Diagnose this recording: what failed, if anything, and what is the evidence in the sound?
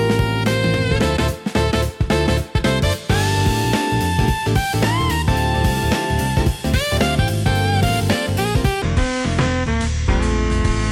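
From 8.82 s to the end, a section at the wrong speed. The sound abruptly slows to 0.65 times its recorded rate. Pitch falls together with tempo, roughly seven semitones lower, so everything turns deep and dragging. A playback or editing stage on a mismatched clock is the likely cause.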